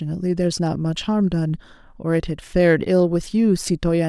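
No technical faults can be heard at any point in the recording.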